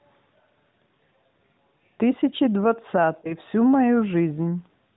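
At 3.22 s a lost AMR speech frame disrupts the sound until about 3.34 s. A frame failed its check, so the decoder filled the gap by reusing the previous pitch and vocal tract settings at reduced gain, consistent with a single missing 20 ms frame. It sounds like a brief dip or warble before the signal recovers, rough for a moment. On a waveform this appears as a short amplitude sag. A spectrogram shows smeared, repeated harmonics there, all below the 4 kHz ceiling of the narrowband codec, whose light character fits roughly 12.2 kbps.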